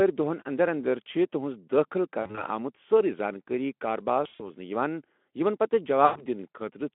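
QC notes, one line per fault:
2.21–2.45 s, 4.23–4.43 s, 6.05–6.25 s, VoIP packet loss concealed by the speech codec: the first comes just after "اندر چھِ تُہنز دٲخل". About 80, 120 and 100 ms go missing, in the first two in bursts up to 40 and 60 ms. The Speex decoder extrapolates the last pitch and filter at falling gain, so the speech smears into a fading buzz or coloured noise and stays weak briefly afterwards.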